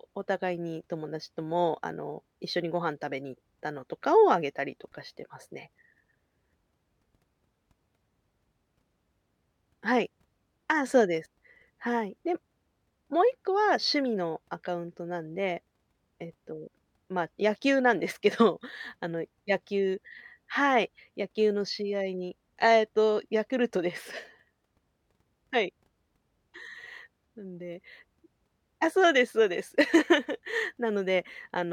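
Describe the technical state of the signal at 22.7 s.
Around 22.7 s the signal is intact, with no dropout, distortion, glitch or other fault audible in the speech at that point.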